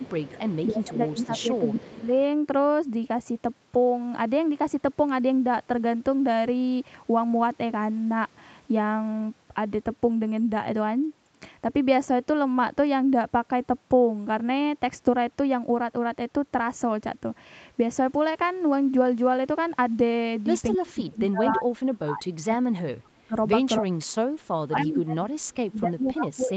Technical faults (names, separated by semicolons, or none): echo leak; speech suppressed in double talk